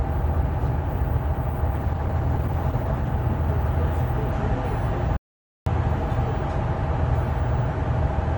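From 1.74 to 3.15 s there is a call bitrate drop. The sound keeps going but turns rough and watery, with the top end dulled, which fits the encoder falling from around 32 to 14 kbps. Unlike a dropout, nothing goes missing; the audio just gets coarser for about 1.3 s before clearing.

From 5.17 to 5.66 s comes an audio dropout to silence, lasting about 0.5 s. The sound cuts off mid-flow into dead digital silence with no room tone at all, which sets it apart from a quiet passage or a noise gate. The likely cause is that the input was briefly lost while the recorder kept writing silence.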